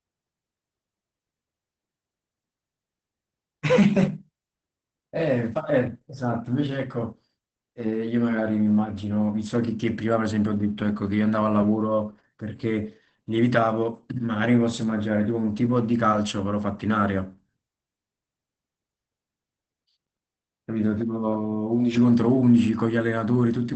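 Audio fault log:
Throughout: Opus voice compression. The speech has nothing above 8.6 kHz and sounds plainly hoarse and faintly robotic. This points to the SILK linear-prediction coder running wideband at a low rate, which fits roughly 12 kbps. With so few bits, the excitation behind each 20 ms frame is coded coarsely, so the voice loses its natural texture. A plain low-pass filter would only dull the sound, but here the speech itself also turns rough and synthetic.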